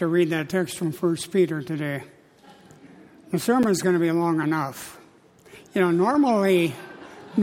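A block of digital silence at 3.63 s: about 8.3 ms of samples drop abruptly to silence and return without any fade, so it sounds like a brief tick.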